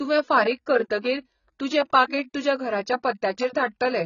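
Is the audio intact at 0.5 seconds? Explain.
No. AAC compression is present at 0.5 s and throughout the speech: nothing reaches above 7 kHz, and the sound is dull, smeared and fizzy. The likely cause is AAC-LC coding at a very low bitrate, about 16 kbps, which quantises spectral lines coarsely and drops the top band.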